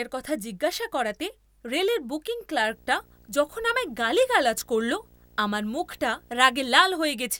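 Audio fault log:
2.63–6.74 s: video or display buzz after "জিজ্ঞাসা করাতে রেলের বুকিং". A screen cable couples in, giving a 59.94 Hz buzz with hash and a 15.7 kHz line whine, roughly 30 dB down.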